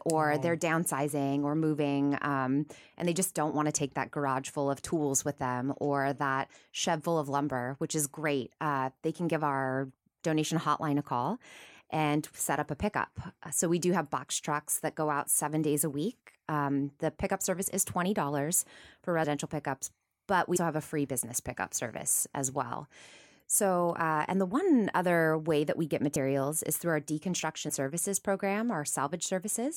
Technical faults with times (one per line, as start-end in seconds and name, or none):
20.55 compressed frames skipped
26.15 compressed frames skipped
27.68 compressed frames skipped